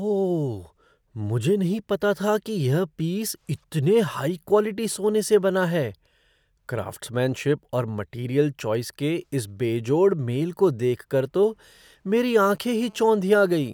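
A 2G phone close to the recording chain, exchanging data, had its radio bursts rectified by the audio circuitry, producing GSM phone buzz in this speech clip from 12.33 to 13.69 s: a harsh, raspy 217 Hz buzz with dense harmonics, about 32 dB below the speech, sputtering intermittently.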